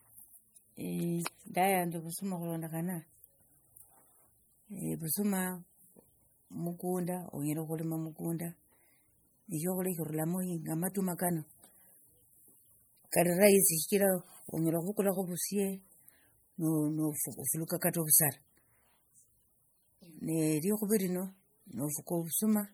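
A speech clip with MP3 compression damage running through its whole length. The artefacts are plainly audible from start to finish. Weak frequency components switch on and off between frames, giving the sound a watery, swirling texture. Attacks lose their sharpness and smear. Nothing is present above 21 kHz. The likely cause is an encoder starved of bits, which fits a low bitrate around 48 kbps. It drops quiet detail to save data.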